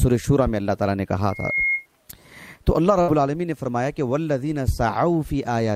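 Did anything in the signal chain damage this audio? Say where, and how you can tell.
Yes. At 1.30 to 1.86 s a loudspeaker feedback squeal occurs: the microphone hears its own speaker, and a 2.1 kHz tone swells in about a third of a second to roughly the program level.

At 3.01 to 3.11 s a burst of packet loss on the network leaves 63 ms of held, fading concealment, then the sound resumes with about 60 ms skipped.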